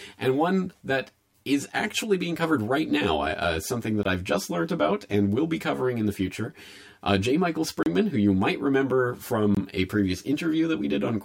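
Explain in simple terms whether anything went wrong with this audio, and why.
Channel delay (comb filtering) runs through the whole speech clip. One of the two channels arrives roughly 10 milliseconds behind the other, and when they are mixed into one, parts of the sound cancel at evenly spaced pitches, starting around 50 Hz and repeating upward. That is why the speech sounds hollow and phasey from start to finish, a bit like talking through a tube.

A block of digital silence appears three times. The first is at 4.03 s, between "uh uh something that" and "I've just learned about", and lasts about 21 ms. The second is at 7.83 s, just before "who you might remember", and lasts 32 ms. The third is at 9.55 s, between "who you might remember" and "a previous", and lasts about 21 ms. Each time the audio drops straight to nothing and back with no fade, so you hear a short hole. The player most likely didn't refill its audio buffer in time, and the 21 ms gaps fit a 1024-sample buffer.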